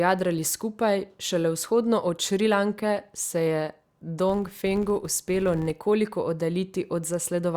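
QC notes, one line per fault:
4.30–5.81 s, filter restarted on every block: each block restarts from silence, giving a regular 86.1 Hz buzz that tracks speech level, unlike random clicks; fits a 512-sample buffer.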